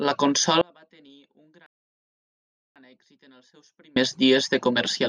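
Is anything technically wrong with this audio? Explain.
Yes, two faults overlap in the first few seconds of this speech clip.

From 0.61 s to 3.96 s there is an audio dropout to a faint residue. The speech cuts out abruptly and about 2.25 s of it is lost, with only a faint trace remaining at roughly 35 dB below normal level before it returns just as suddenly. This most likely comes from the wanted signal failing upstream while the path after the break stayed live, which is why the gap holds a low residue rather than dead silence.

Inside that gap, from 1.66 s to 2.76 s, there is a rebuffering stall. Playback stops outright for about 1.09 s, then continues from exactly where it halted, so no material is dropped but the timeline is stretched by that amount. The player has run out of downloaded audio and waited for more to arrive. Because it sits within the dropout, it is heard as a stretch of even deeper quiet within the already faint gap.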